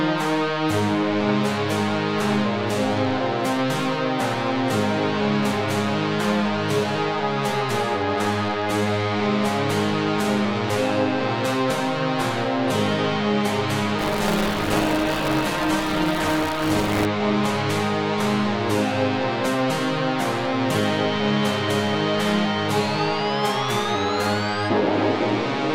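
From 13.98 to 17.05 s there is buffer tearing: a robotic 188 Hz buzz, consistent with a 256-sample buffer, as a small slice of each period replays audio from one lap earlier.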